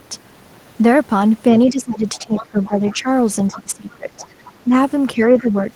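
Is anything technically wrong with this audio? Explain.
Yes. The echo canceller on the talker's end most likely struggled whenever both sides spoke at once, and two kinds of fault result.

Speech suppressed in double talk, at 1.69–3.08 s, 3.47–4.25 s, 4.64–4.70 s and 5.16–5.69 s: unable to separate the near talker from loudspeaker echo, the canceller turned everything down together. The voice dips by roughly 15 dB, then 20 dB, then only about 5 dB in the brief third dip, and 10 dB in the last, sounding pulled back and uneven.

The other side's voice leaking through, at 2.15–2.96 s, 3.52–3.60 s, 4.18–4.26 s and 5.38–5.52 s: the same canceller likely left part of the loudspeaker signal in the microphone feed. A second voice surfaces faintly, about 15 to 25 dB below the main speech, as a longer stretch first and then short scraps.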